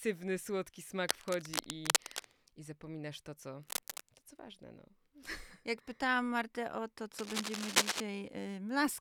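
Cable scratch noise appears three times in this speech. Bursts of dense, ragged crackle cover 1.09 to 2.31 s at about speech level, 3.63 to 4.01 s slightly quieter, and 7.19 to 8.00 s louder than speech. A worn cable or connector being moved is the likely cause.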